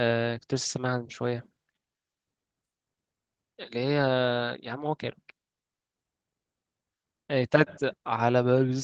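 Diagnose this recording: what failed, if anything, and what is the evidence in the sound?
Nothing failed in this recording; the speech shows no evidence of any fault along its call path.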